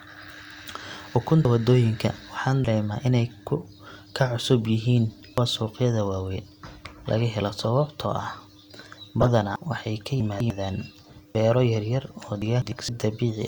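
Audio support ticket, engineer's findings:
Dropped buffer (overrun) at 1.45, 2.65, 5.38, 9.56, 11.35 and 12.89 s. Each one has the speech jumping forward and no gap of silence. Around a tenth of a second is missing at most of them, somewhat more at 5.38 s, and about a third of a second at 9.56 s. Likely capture-side overrun: samples not read before the hardware reused the buffer, so the neighbouring audio is spliced together.

Corrupt frame decoded at 7.63–7.65 s and 9.21–9.31 s. A short glitch, then a longer one. The first spans a couple of codec frames, the second a handful. Decoder component: damaged compressed frames were played instead of concealed. Wrong gains and misread codes put energy at the wrong frequencies for each bad frame.

Chunks out of order at 10.20–10.50 s and 12.42–12.72 s. A garbled, jumbled stretch. Fits 100 ms chunks, with one arriving two chunks late and playing after audio that should follow it. 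Buffering or write path. No audio lost, but the sequence is wrong, with three hard joins per event.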